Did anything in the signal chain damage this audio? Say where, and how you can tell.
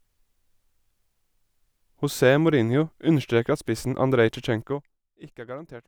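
Yes. Zipper noise from 4.6 to 5.0 s: a level drop of roughly 15 dB applied in 1 dB steps at about 40 per second, each step clicking audibly. This unsmoothed stepped gain change ticks while it moves.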